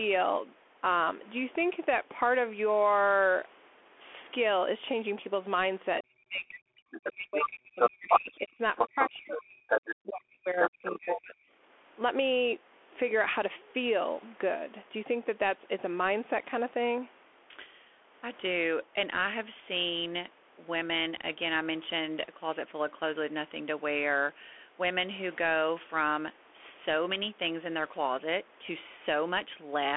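A speech recording carried over a Bluetooth CVSD headset codec for its whole length: nothing passes above about 3.8 kHz, the band sits roughly within a 300 Hz to 3.4 kHz telephone line, and the codec damage is plainly audible. The codec tracks the waveform one bit at a time with an adapting step (the sound fits a 64 kbps CVSD link), so loud high-frequency passages outrun the step and turn rough, s sounds become scratchy, and a granular hiss sits beneath the talker. That constant grain, rather than the smearing or warbling of a lossy streaming codec, is what identifies it. From 6.02 to 6.54 s and again across 7.0 to 11.36 s the talker's speech is suppressed in double talk, the likely cause being an echo canceller that could not separate the near voice from loudspeaker echo and ducked both. The dips reach about 35 dB and affect roughly 0.4 s in the first stretch and about 4 s in the second, with the voice thinning or dropping out in pieces. 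Because these dips fall while another voice is present, they are not simple signal dropouts. That other voice is the other side's voice leaking through, at 6.55 to 7.46 s, 7.8 to 8.36 s, 8.76 to 9.08 s, 9.68 to 9.96 s and 10.47 to 11.21 s. It runs from about 5 dB below to about 5 dB above the talker and is likely residual echo the canceller failed to remove. It can be told apart from crosstalk or a second person in the room because it arrives around and during the suppression. The call microphone processing's high-pass filter trimming the deepest bass is normal.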